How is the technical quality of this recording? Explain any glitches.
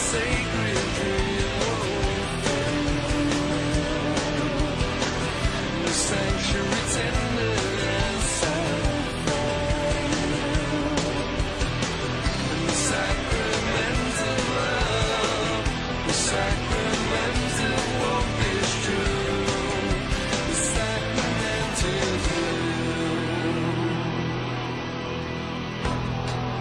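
The recording carries one fault, computer activity noise, running through the whole clip. A faint buzzing chirp sits beneath the sound, pulsing at around 150 times per second. It lies roughly 45 dB below the signal, so it is quiet. It happens because the processor, graphics card or mouse draw changing current, and that disturbs the ground the audio circuit shares. The noise follows the computer's workload, not the recorded sound.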